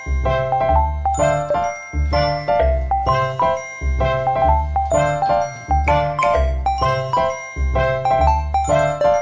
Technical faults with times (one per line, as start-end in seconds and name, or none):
none